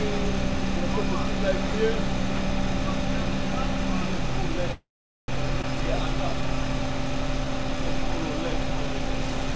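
At 4.72 s the sound stops moving forward and hangs until 5.29 s. This is a call audio freeze. The last bit of sound carries on briefly as a fading buzz or hiss. Then about 0.44 s of silence follows. The likely cause is packets held up in transit, which emptied the jitter buffer. When they arrive, the sound resumes exactly where it stopped. Nothing is lost, but a gap of roughly 0.56 s has been inserted.

From 5.62 to 5.64 s there is a skip ahead. Playback jumps forward with almost no gap. Roughly a fifth of a second of sound is gone. The two sides are butted together almost directly. Dropping this stretch pulled the delay back down by about the same amount.

From 5.80 to 9.12 s a jitter buffer slow-down follows. The sound plays at 94% speed, but the pitch does not change. The receiver repeats single pitch periods and slivers of quieter passages over and over. This stretches the material by 217 ms in total. 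Sustained sounds come out drawn-out, with a faint warble in places. Throughout the clip, the G.722 call codec leaves nothing above 8 kHz, which gives a dulled top end.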